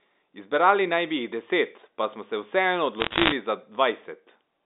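Bit errors on a digital phone line occur from 3.0 to 3.32 s, a burst of crackle laid over the speech. On a G.711 mu-law link each corrupted bit alters a single 8-bit logarithmic sample, so a flip in the sign of a loud sample or in an upper bit throws that sample far off and produces a sharp tick. With roughly one or two bits in a hundred damaged across this stretch, the ticks pile up into crackle while the speech underneath carries on unchanged.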